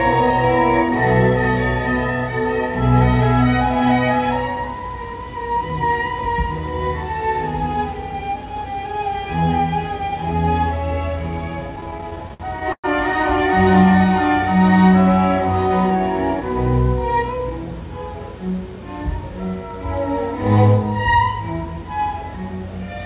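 Repeated stalls (stutter), 11.76 to 12.86 s: the jitter buffer ran dry about a dozen times, longest 110 ms, so the repeated sound makes the audio drag and stutter.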